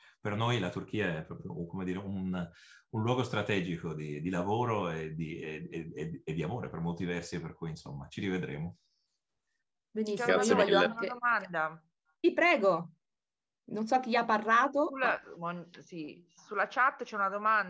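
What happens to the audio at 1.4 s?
Nothing goes wrong at 1.4 s; the audio plays through that moment intact, with no dropout, click or distortion.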